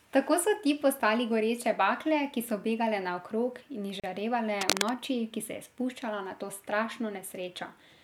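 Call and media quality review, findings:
Gap at a join of encoded pieces, 4.00–4.04 s: a 36 ms hole of silence in running speech, edges smeared by the codec, with speech resuming exactly where it stopped. This points to untrimmed encoder start delay and end-frame padding between separately encoded segments. Unlike packet loss, nothing is skipped or concealed.

Cable scratch noise, 4.61–4.92 s: dense, uneven scratchy rustling over the speech for about 0.3 s, roughly as loud as the speech itself. The likely cause is a worn cable, connector or control being moved, with its contact resistance fluctuating. Irregular bursts set it apart from steady hiss or isolated clicks.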